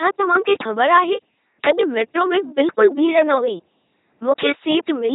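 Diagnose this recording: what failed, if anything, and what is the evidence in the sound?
Codec stage: the whole clip was coded by an LPC-10 vocoder, as fits a 2.4 kbit/s link, leaving heavily buzzing, robotic speech with nothing above 3.9 kHz.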